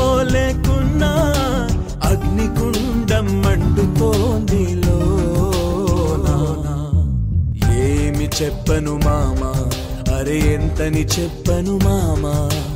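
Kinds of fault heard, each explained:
Doubled audio track: From 5.96 to 7.52 s a second full-band copy of the sound runs about 0.4 s behind, a few dB quieter. It has no decay or room colour. It starts and stops abruptly, likely from a slower capture path adding it again.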